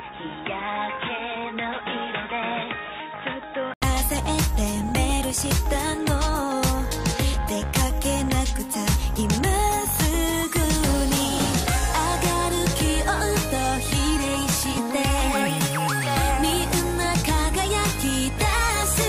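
From the start to 3.82 s the audio is band-limited, with nothing above 3.8 kHz, so it sounds dull and boxy. It sits roughly 5 dB lower and carries its own background noise about 40 dB below the signal. At 3.82 s a short gap of about 80 ms is followed by full-band sound. This pattern points to an input switched to a poorer device, likely a secondary microphone or a headset call profile, before the system changed back.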